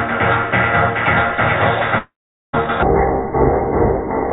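From 1.98 to 2.64 s, a long network dropout likely lost about 560 ms of audio. The last sound smears into a fading buzz, then silence.

From 2.83 s to the end, a section at the wrong speed, likely played at 0.567 times its rate, drags slowly and sits nearly ten semitones lower.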